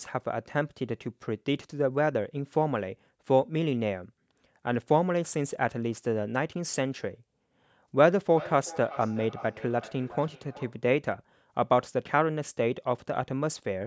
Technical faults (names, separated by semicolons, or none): feedback echo between two devices